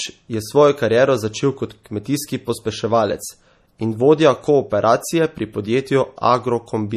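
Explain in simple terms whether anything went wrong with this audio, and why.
Yes, two things went wrong. The whole clip has a watery, swirly quality, and nothing is heard above 15 kHz. This is likely MP3 compression. The encoder ran short of data, dropped the treble, and let faint details flicker on and off.

At 1.84 s, between "kariero začel kot" and "kmetijski pospeševalec in vodja", there is a pre-echo. A brief hiss comes just before a sharp sound. The codec spread its noise across a short stretch, so it leaked into the quiet moment first.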